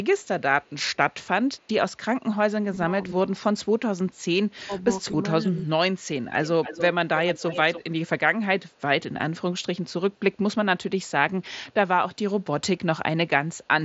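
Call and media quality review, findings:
Echo leak: far-end echo canceller likely passing residual loudspeaker pickup back down the line. A delayed copy of the sound returns at 0.23, 0.62, 1.57, 6.45, 7.17 and 8.71 s. It is faint at a 228 ms delay early on, then much stronger at about 280 ms at 6.45 and 7.17 s.

Speech suppressed in double talk: canceller likely mistaking overlapping talk for echo and ducking the near talker. Level dips by up to about 15 dB, in pieces, from 2.66 to 3.54 s and from 4.65 to 5.71 s.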